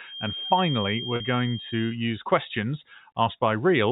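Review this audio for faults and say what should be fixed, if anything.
A thin whistle near 3.2 kHz, roughly 10 dB under the speech, runs from 0.0 to 2.0 s. It is a feedback whistle, likely from a loudspeaker-to-microphone loop held just at the edge of oscillation. To prevent it, reduce monitor gain, move the microphone away from the speaker, or enable echo and feedback suppression.

At 1.16 to 1.20 s a brief held, buzzy note replaces the speech for 40 ms. This is packet loss with pitch repetition: the receiver repeated the last pitch period to cover the gap, which fits about four lost 10 ms packets. To prevent it, stabilise the network path and add jitter buffering or forward error correction. The G.711 telephone band limit is audible throughout.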